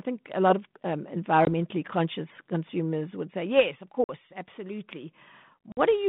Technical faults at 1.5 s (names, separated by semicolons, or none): packet loss on an ADPCM call